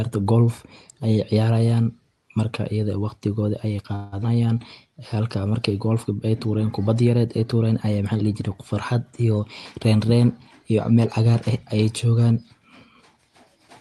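At 3.95 s, right after "ida eh waqtigooda ayeey", a call audio freeze occurs. Packets were likely held up in transit, leaving the jitter buffer empty. For about 0.17 s the receiver stretches the last sound into a fading tail, then resumes where it stopped, losing nothing but adding delay.

At 4.22 s a skip ahead follows. A stretch of roughly 70 ms was dropped while later audio was already queued, so playback jumps forward almost seamlessly. The join is abrupt: a small piece of sound simply vanishes, and the added delay is partly recovered.

From 4.35 to 5.15 s, just before "markay golfka", the jitter buffer slow-down begins. Running low, the buffer rebuilt its reserve by repeating single pitch periods again and again, adding 79 ms. The sound plays at about 91% speed with unchanged pitch, drawn out.

From 10.91 to 11.83 s a jitter buffer speed-up runs the other way. Holding more audio than its target, the buffer trimmed short pitch-period pieces repeatedly, removing roughly 70 ms. 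The sound runs at about 108% speed at the same pitch and comes across as hurried. Throughout, the Opus call path limits the top end to about 12 kHz, which fits a bitrate near 32 kbps.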